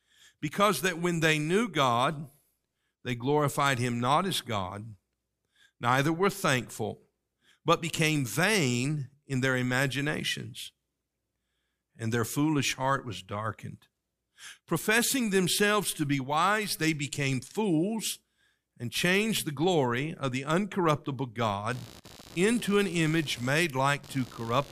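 Shifting load in the computer disturbs the audio circuit's shared ground from 21.70 s, right after "glory of the uncorruptible", to the end. This computer activity noise sounds like a chattering buzz pulsing roughly 70 times a second, about 20 dB under the speech.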